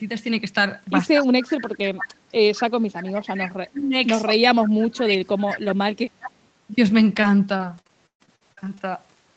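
From 1.13 s to 5.64 s the speech is repeatedly pulled down, in total about three seconds of it. At its deepest the level falls by roughly 30 dB, so parts of the speech thin out or vanish in pieces rather than fading smoothly. This is speech suppressed in double talk, likely because the echo canceller could not tell the near talker from loudspeaker echo while both sides spoke, and attenuated everything together.

Inside that stretch, an echo leak appears. A delayed copy of the speech, trailing the original by 204 ms, is heard first as a brief scrap from 2.54 s to 2.61 s at about 20 dB below the speech. It returns much more strongly from 3.67 s to 5.59 s at about 10 dB down, and once more from 6.20 s to 6.31 s at about 15 dB down. The fixed delay points to the far end's loudspeaker output reaching its microphone and likely not being fully cancelled before being sent back.

From 7.15 s to 8.79 s, repeated packet loss gives the speech a choppy, robotic quality. 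Short holes follow one another closely, the longest about 130 ms. Roughly 355 ms of the span is filled by stretching the preceding sound and about 380 ms is simply missing, so around a fifth of this stretch is concealment. That patching is what produces the choppy texture between the audible dropouts. Throughout, the audio stops at 8 kHz, as expected on this call path.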